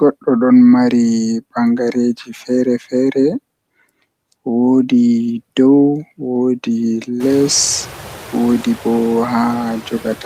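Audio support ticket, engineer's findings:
Noise suppressor artifacts, whole clip. Background pulled down by about 15 dB between phrases, then pumping back up under the speech. Component: noise suppressor, gating bands frame by frame as it judges them steady noise. Room noise jumps by about 22 dB around 7 s but stays about 18 dB under the speech. That's the room, not us.

Speech cut by the noise suppressor, 2.15 to 2.5 s. About a tenth of a second of speech in that window gets ducked, dipping by up to about 14 dB, so the soft bits sound swallowed. Component: same noise suppressor. It scored low-level speech energy as noise and attenuated it along with the background.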